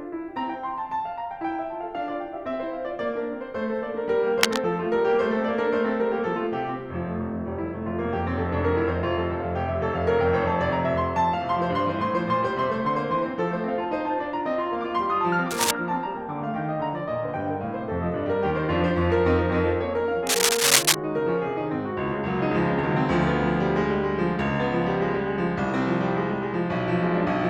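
A worn cable or connector was likely being moved, causing cable scratch noise: rasping bursts at 4.41–4.60 s, 15.51–15.71 s and 20.27–20.95 s, level with the music, the last somewhat louder.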